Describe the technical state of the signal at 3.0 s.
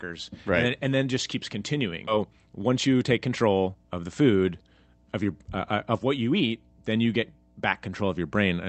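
At 3.0 s the speech is inside a jitter buffer speed-up from 2.17 to 4.45 s. Short pitch-period slices are cut repeatedly, so the speech runs about 113% fast at unchanged pitch and sounds hurried. Roughly a third of a second is dropped. Under it sits a steady 60 Hz mains hum, present throughout the clip. It is a low tone well below the speech level, likely from a ground loop or nearby transformer.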